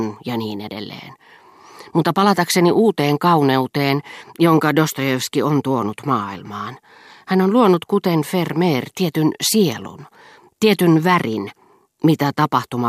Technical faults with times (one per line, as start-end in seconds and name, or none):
none